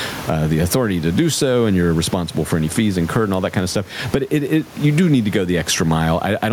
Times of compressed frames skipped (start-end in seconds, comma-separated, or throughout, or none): none